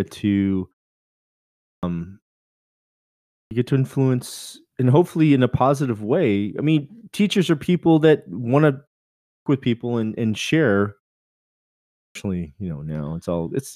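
The output device sleeps during silence and is slow to wake, causing clipped starts after a pause at 1.52, 3.18 (before "get to influence and"), 9.15 (after "people that want to", before "with people and and") and 11.82 s. Roughly 0.31 to 0.33 s is swallowed each time, so speech bursts in abruptly, missing its opening sounds.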